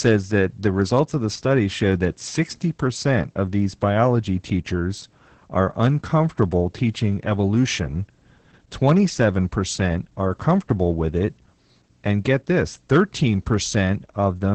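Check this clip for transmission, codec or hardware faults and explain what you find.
Two faults are audible: heavy low-rate voice compression throughout, and a steady train of faint clicks from just after the start to the end.

Opus voice compression runs through the whole clip. At a bitrate in the region of 10 kbps, the SILK linear-prediction coder codes the excitation coarsely in 20 ms frames, and the band stops near 8.8 kHz. The heavy damage leaves the speech muffled, hoarse and slightly robotic.

Clock slip clicks run from 0.21 s to 14.52 s, ticking roughly every tenth of a second, about a hundred in all. Each is a single dropped or repeated sample, likely from two unsynchronised device clocks differing by roughly 150 ppm. They are heard as faint regular ticks over the speech.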